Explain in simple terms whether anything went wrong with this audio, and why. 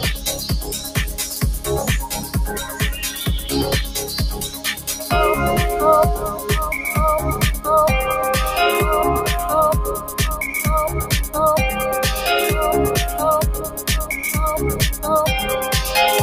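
The sound keeps pumping up and down throughout, with held parts and fading tails thinning out while sharp onsets push through. That is a noise suppressor applied to music or sounds: a speech cleanup tool mistook steady, lingering sound for background noise and kept turning it down.

Sound cut by the noise suppressor is most obvious from 0.0 to 0.97 s, 1.19 to 1.39 s, 2.11 to 3.22 s, 3.96 to 4.16 s, 4.35 to 5.11 s, 9.97 to 10.2 s and 13.6 to 13.89 s. In these stretches the sound sinks noticeably or its decay stops short, because the suppressor judged it to be noise.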